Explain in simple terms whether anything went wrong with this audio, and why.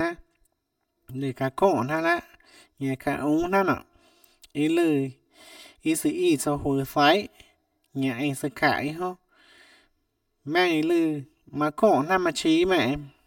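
Channel delay (comb filtering) runs through the whole clip, giving the speech a hollow, slightly phasey, boxed-in tone. One of the two stereo channels arrives about 3 milliseconds behind the other, and when they are combined into a single channel, parts of the sound cancel each other out. That carves a row of evenly spaced gaps into the tone, starting around 150 Hz and repeating upward, which is why the voice sounds thin and tunnel-like.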